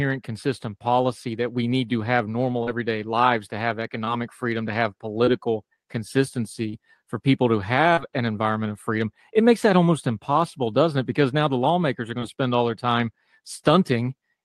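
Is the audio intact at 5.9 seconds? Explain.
Yes, the speech at 5.9 seconds is intact, carried through the call path with nothing breaking or disturbing the sound at that moment.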